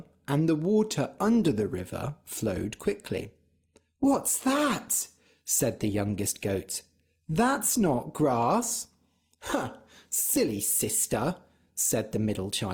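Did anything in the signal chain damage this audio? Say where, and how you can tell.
Yes. From 1.09 s, just after "and the", the quality suddenly drops and codec artefacts rise with no gap: an adaptive stream at a lower bitrate, consistent with the network dropping Opus from about 64 to 24 kbit/s.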